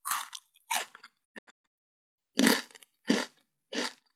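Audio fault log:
1.24–1.96 s, digital broadcast dropout: the receiver mutes in several short holes, the longest 128 ms, about 512 ms lost in all, each with a 20 ms fade. Unlike analogue fading or packet-loss concealment, nothing is smeared or repeated; the missing audio is simply gone.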